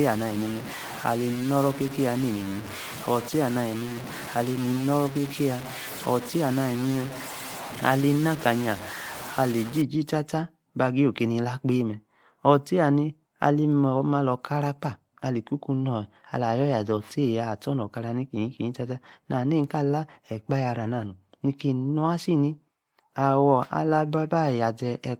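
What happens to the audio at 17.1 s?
At 17.1 s the speech carries on intact, with no dropout, click, distortion or other fault.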